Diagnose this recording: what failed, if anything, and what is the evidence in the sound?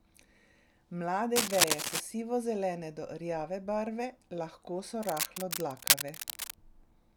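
The analogue wiring has cable scratch noise, likely from a worn cable or connector being moved so its contact resistance jumps erratically. Dense, ragged bursts of scratching cover the speech from 1.35 to 2.00 s, somewhat louder than it, and from 5.03 to 6.54 s at about equal level.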